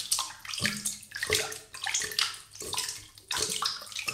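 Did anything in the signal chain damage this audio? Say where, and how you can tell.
No, nothing damaged this audio.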